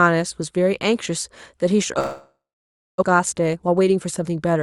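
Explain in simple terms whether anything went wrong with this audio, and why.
Two things go wrong, both from about 2 s on.

From 1.99 to 3.04 s the sound stops arriving. This is a long network dropout, likely caused by a break in the connection. The receiver first keeps the last sound going as a fading buzz. Then about 0.6 s of near silence follows. When the sound returns, roughly three quarters of a second of what was said is simply gone. That part is never heard.

From 3.12 to 4.59 s there is a jitter buffer speed-up. After the gap, the delayed audio arrives in a bunch, so the receiver has too much waiting. To catch up, it cuts out many tiny slices of sound. Playback runs about 14 percent faster, but the pitch stays the same. In total, roughly a fifth of a second is trimmed away. The speech sounds rushed here.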